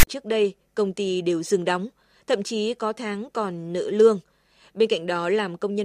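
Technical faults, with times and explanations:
0.00–0.07 s, file tags played as audio: a hard-edged, lopsided rasp then brief silence before "đây công ty đều", as text tags and zero padding were decoded as samples.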